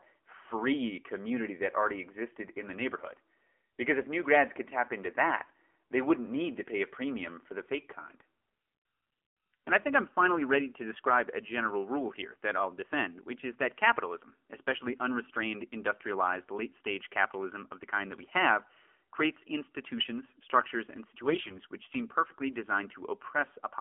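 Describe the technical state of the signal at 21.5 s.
AMR bit errors run from 21.18 to 21.59 s, a span of roughly twenty 20 ms frames. Flipped low-priority bits, at a few percent, misplace the excitation pulses and skew the fine pitch, gain and spectral values, so the speech keeps its pitch and level but turns hoarse, scratchy and gargly.

AMR narrowband mobile codec coding is present throughout, including at 21.5 s. The line is limited to 300 Hz to 3.4 kHz, and the low-bit vocal-tract model, which fits the 7.4 kbps mode, leaves the speech plainly buzzy and synthetic.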